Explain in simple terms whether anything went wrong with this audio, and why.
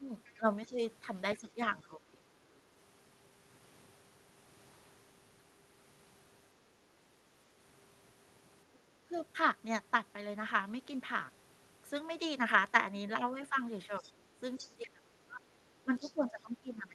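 When both people on the call talked at once, the echo canceller likely couldn't tell this talker apart from the loudspeaker echo, so it turned everything down. This is speech suppressed in double talk: the voice dips or fades at 0.0 to 0.79 s, 1.4 to 2.24 s, briefly at 9.03 to 9.14 s, and most deeply from 14.0 s to the end.

The echo canceller also likely failed to remove all of the other side's voice playing from this talker's loudspeaker. That's the other side's voice leaking through: a faint second voice at 0.24 to 0.73 s, and clearer ones at 13.99 to 14.88 s and 16.01 to 16.4 s.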